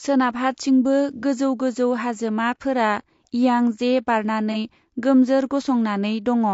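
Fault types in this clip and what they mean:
Low-delay AAC compression: The speech has a rough, grainy texture throughout, with noise filling the gaps between the harmonics and a top end that sounds thin and synthetic. That's the sound of a short-frame codec that can't resolve pitch finely, so it spends bits poorly. The cause is likely AAC-ELD, the low-delay flavour used in video calls, and the damage level fits a rate of around 32 kbps.
AAC frame loss with concealment: Twice a frame's worth of audio drops out and the decoder patches the hole by stretching the last good spectrum, which leaves a brief smeared, noisy, phasey blip rather than silence. The first hits at about 1.19 to 1.24 s, just before "गोजौ गोजौ हाजोमा", and the second at about 4.52 to 4.56 s. Each gap is around 30 ms, which fits a single lost frame.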